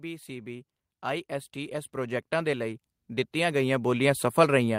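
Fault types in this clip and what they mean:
Automatic gain rising: the gain control, judging the input too quiet, climbs steadily from 0.05 s onward, lifting speech and background together, one-way rather than pumping.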